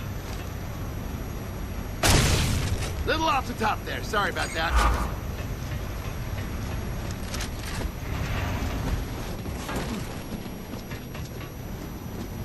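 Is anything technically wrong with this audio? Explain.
Yes. A switching supply whistle runs through the whole clip. A switching power supply is cycling at an audible rate, either in a burst mode or beating against another supply, and that switching energy leaks into the audio path. The result is a thin, high whistle sitting between roughly 5.6 and 6.0 kHz, wandering within that band rather than holding one pitch, at a level roughly 25 dB below the wanted signal.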